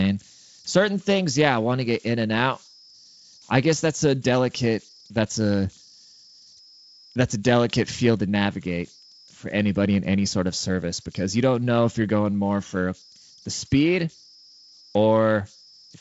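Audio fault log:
throughout: converter idle tones. A faint whistle sits around 5 kHz, about 29 dB below the speech. It is clearest in the pauses and turns into a grainy hiss under quieter syllables. This is a delta-sigma converter without dither settling into repeating bit patterns at low input levels. On a spectrogram it shows as a thin horizontal line near 5 kHz that runs through the gaps, well below the band edge near 7.7 kHz. In the waveform the pauses never go fully flat and carry a low residual fuzz.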